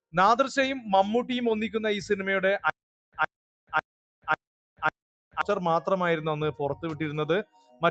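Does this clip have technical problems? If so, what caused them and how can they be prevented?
Yes. From 2.70 s to 5.41 s there is a stutter with silent gaps. The same 118 ms fragment repeats five times, with about 429 ms of dead digital silence after each, so it recurs every 547 ms. This is most likely a stalled player or stream replaying its last buffer on each retry, and the material that belonged in that span is lost. A waveform shows identical short blocks separated by flat silent stretches, and a spectrogram shows matching slices with empty columns between them. A larger jitter buffer and a steadier network connection would prevent this.

From 7.44 s to 7.83 s, about 400 ms of sound is cut by the noise suppressor. The suppressor mistook it for noise and pulled it down by up to about 16 dB, more than the surrounding material. The waveform envelope sags. On a spectrogram the energy thins abruptly across the band, which already stops at 8 kHz from the call path. 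A less aggressive suppression setting, or turning suppression off for non-noise sources, would prevent this.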